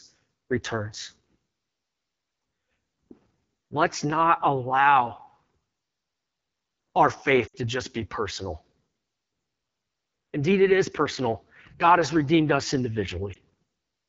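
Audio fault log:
Throughout: AMR wideband (HD Voice) codec. The sound keeps its 7 kHz bandwidth, with a hissy, noise-filled band above 6.4 kHz, but it is rough and raspy, which fits the low 8.85 kbit/s mode. Unlike narrowband telephony, the upper band is present but synthetic.
7.47–7.55 s and 13.33–13.37 s: lost AMR speech frames. The first spans about 60 ms, consistent with three consecutive lost frames, just before "to just be personal". The decoder holds and fades the prior sound, dropping to near silence within two frames. The second, about 20 ms, is a single-frame dip. Neither is a clean silent gap.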